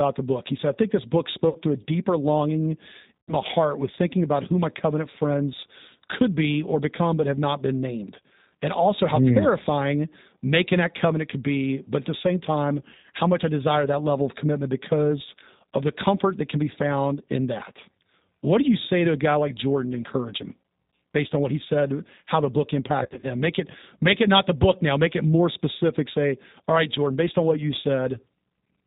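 Throughout, the speech carries G.729 codec damage, and it is plainly audible. The sound is narrowband and slightly rough and synthetic, which fits an 8 kbit/s G.729 stream. The decoder rebuilds each frame from a vocal tract filter and a few pulses, so detail is lost.

At 1.49 s, VoIP packet loss concealed by the speech codec sets in until 1.58 s. The decoder extends its last pitch and filter and fades the gain. The gap sounds smeared, consistent with about 60 ms missing. At 3.21 s it recurs, lasting to 3.34 s. This gap is longer, closer to 90 ms, and the stretched sound decays further. At 23.03 s the loss is scattered over roughly 200 ms, with runs up to about 30 ms. The result is a stuttering, weakened stretch until 23.27 s.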